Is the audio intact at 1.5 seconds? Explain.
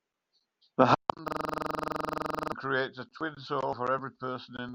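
No. From 1.28 to 2.52 s a system hang loop strikes: the machine froze while the audio hardware kept replaying one ring buffer, about 43 ms long, which fits a 2048-sample buffer. That fragment repeats at 23.4 Hz as a rapid machine-gun stutter, and roughly a second and a half of real audio is lost.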